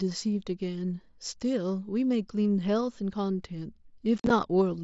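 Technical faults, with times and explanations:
4.18 to 4.30 s, unconcealed Bluetooth headset packet loss: across about 120 ms near the end, the audio breaks into short holes totalling about 67.5 ms, the longest run 45 ms. Voice packets between headset and phone went missing and nothing filled the gaps, so the sound stops and restarts with hard edges that chop. On the waveform these are flat or near-flat stretches with sheared edges. On a spectrogram they are vertical blank columns flanked by thin broadband lines at each cut.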